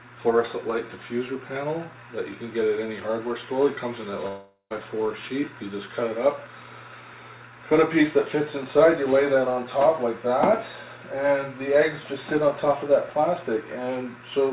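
From 4.28 s the sound turns into a fading buzz for about 0.42 s, then falls silent until 4.81 s, likely a long network dropout.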